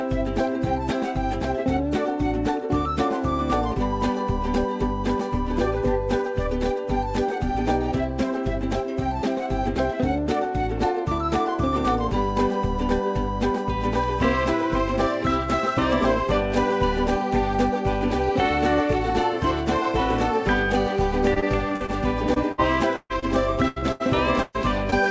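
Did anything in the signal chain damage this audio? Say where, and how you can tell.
Yes. Repeated packet loss (robotic sound) occurs at 21.34–21.90 s and 23.68–24.94 s. Four and six network gaps were patched by extending prior sound, giving choppy stretches.

Short concealed packet loss occurs at 22.34–22.38 s and 23.20–23.24 s. About 20 ms went missing each time, and the receiver filled the holes, leaving brief smears or wobbles.

Burst of packet loss occurs at 22.52–22.60 s and 22.96–23.12 s. About 60 ms and 140 ms of audio were lost in the network and replaced by a fading continuation, the longer one ending in silence.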